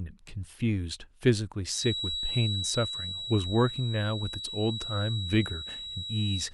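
A loudspeaker-to-microphone loop likely poised at the point of feedback adds a feedback whistle to this speech: a thin, steady 3.9 kHz tone from 1.67 s onward, sitting well below the speech level.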